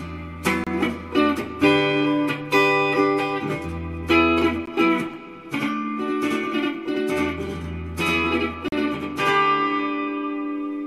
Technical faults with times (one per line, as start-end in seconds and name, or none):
0.64-0.67 gap between stream segments
4.66 gap between stream segments
5.14-10.86 channel delay (doubling)
8.68-8.72 gap between stream segments